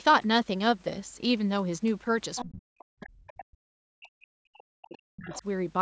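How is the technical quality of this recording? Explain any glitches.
The speech is repeatedly disrupted by echo-canceller trouble during a call.

Speech suppressed in double talk, 2.44–3.32 s and 3.48–5.45 s: the canceller likely mistook overlapping talk for echo and ducked everything. The voice drops by up to about 40 dB, visible as collapsed waveform envelopes and faded spectrogram bands.

Other side's voice leaking through, at 2.35–2.45, 3.30–3.44, 4.86–4.98 and 5.29–5.42 s: residual loudspeaker echo likely slipped past cancellation. It is heard as scraps about 10 to 30 dB below the main voice, appearing as short, weak harmonic patches on the spectrogram.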